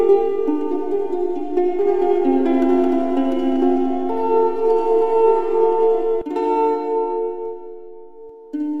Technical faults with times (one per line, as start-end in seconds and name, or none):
none